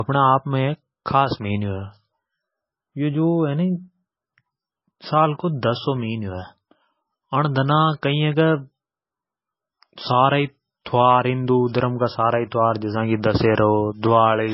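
Throughout, low-bitrate audio saved at a high bitrate: a very heavily compressed MP3 was likely re-encoded generously, so the speech stays dull, with nothing above 5.6 kHz.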